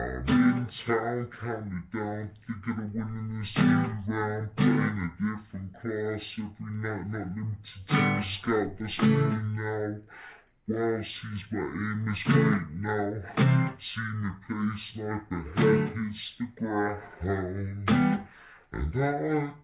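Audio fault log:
throughout, wrong sample rate: the sound runs at half speed and sits 12 semitones (a full octave) low, because samples are played back at half the rate they were captured at with no conversion, which fits 16 kHz audio played at 8 kHz.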